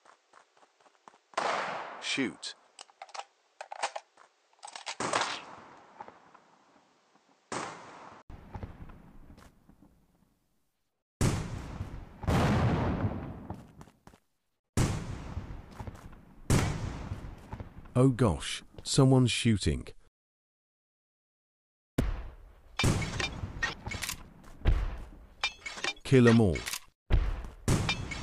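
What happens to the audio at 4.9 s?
Input switched to a poorer device, 0.0 to 8.30 s: likely a narrower-band microphone, removing everything above 8.8 kHz, so the sound is duller and quieter, with its own background noise about 35 dB below the signal, and an 80 ms gap at the switch.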